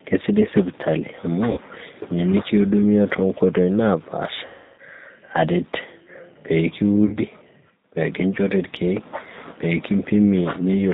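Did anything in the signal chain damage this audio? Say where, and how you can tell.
Yes. The G.729 codec, at 8 kbit/s, shapes the whole clip. Its filter-and-pulse reconstruction cuts everything above 4 kHz, leaving the speech plainly rough and synthetic.

VoIP packet loss concealed by the speech codec occurs at 1.51–1.60 s, 4.46–4.80 s and 7.06–7.18 s, covering about 60, 320 and 60 ms of lost audio. The decoder stretches its last frame into a fading buzzy tone or coloured noise, and the speech stays weak briefly afterwards.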